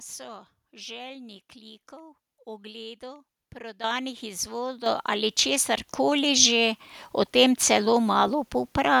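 At 3.84 s the microphone volume is stepped up by about 10 dB, and at 4.86 s it steps up again by about 7 dB. Each time the input level is raised in a single jump, so the speech and the background noise grow louder together. On a waveform the envelope widens abruptly at both points, and a spectrogram shows every band, noise floor included, brightening at once.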